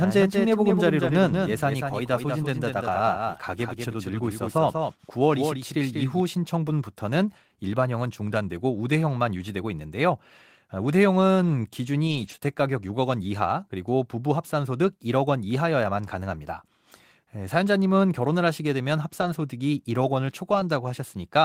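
A doubled audio track runs from the start of the clip to 6.2 s: the speech is heard twice, with a full-band second copy about 5 dB quieter trailing by roughly a fifth of a second. It has no room colour and cuts off abruptly, most likely from a second capture path or an edit leaving two copies out of step.

A lost packet rebuilt from error correction occurs at 1.07 to 1.09 s, 6.67 to 6.69 s, 12.07 to 12.33 s, 13.24 s, 19.22 to 19.28 s and 20.52 to 20.62 s. The receiver decoded low-bitrate copies carried in the following packets, so there are no gaps. Each rebuilt stretch sounds rougher and noisier. The longest, 140 ms, fits seven separate losses.

Short concealed packet loss follows immediately at 12.35 to 12.40 s. About 20 ms never arrived and had no backup copy, so the decoder extended the preceding sound for 22 ms and blended back into the real audio, leaving a brief smear.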